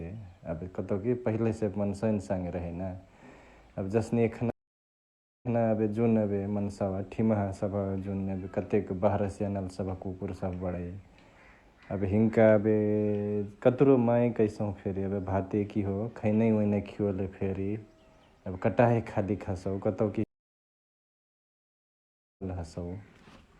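Two stream reconnects occur. After "एबे जसने" at 4.50 s, the audio drops out for 0.93 s, and the restarted decoder resumes 0.13 s earlier, repeating a sliver. After "खालीक हसउ कतउ कि" at 20.24 s, a 2.15 s silence ends about a second further on, skipping material.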